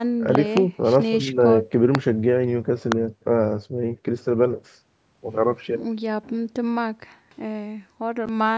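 Right at the start there's a loud pop, actually two in quick succession between 0.35 and 0.59 s, then single ones at 1.95–1.97 s and 2.92–2.94 s. Each jumps roughly 20 dB above the speech, which carries on underneath, likely from an electrical step like a plug, switch or static discharge.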